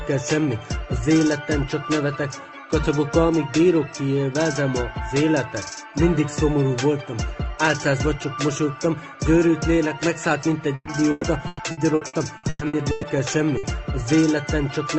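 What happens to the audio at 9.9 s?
Nothing goes wrong at 9.9 s: the audio carries on intact through that moment, with only the ordinary coding character of the call path.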